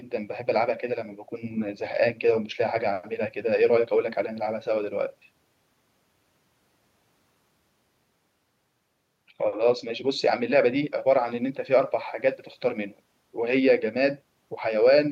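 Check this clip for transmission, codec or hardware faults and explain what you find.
Nothing wrong turns up anywhere in this speech recording, so there's nothing to report.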